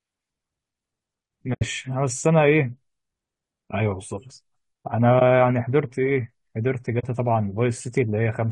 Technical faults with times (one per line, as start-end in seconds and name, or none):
0.00-8.52 low-delay AAC compression
1.53-1.62 AAC frame loss with muting
5.19-5.22 AAC frame loss with muting
6.99-7.04 AAC frame loss with muting